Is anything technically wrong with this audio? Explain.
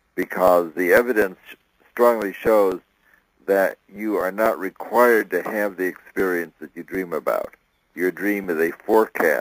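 Yes. Periodic USB or driver dropouts: from 0.23 to 9.19 s, the audio path stalls every 0.25 s, skipping about a millisecond each time, which produces about forty regular ticks.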